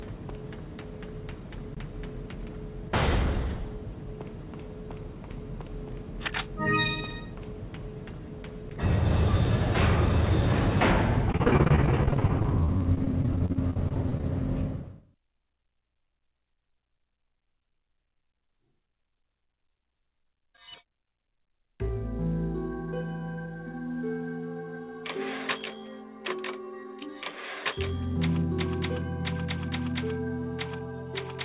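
From 11.32 to 14.23 s there's repeated packet loss, giving a robotic, choppy stretch: dozens of dropouts up to 42 ms are patched over, covering about a quarter of the span, on narrowband audio topping out at 4 kHz.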